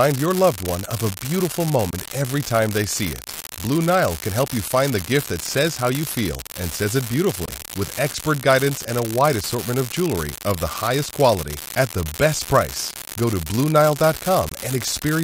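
From the start of the speech to its end there is a steady crackle, the mark of an unreliable data bit. One line in the digital path is marginal, so its bit flips in a random share of samples. Each flip adds a spike of identical size, and together they form a fine, even fizz that does not follow the level of the speech and carries on through the pauses.

At 1.91 s, 7.46 s and 14.49 s the output drops to silence for roughly 35 ms. The speech resumes further along rather than where it stopped, as if it had kept playing through the hole. That pattern is likely a Bluetooth dropout: packets missed their delivery window and were discarded. The lost span of about 23 ms each time fits a single missing frame.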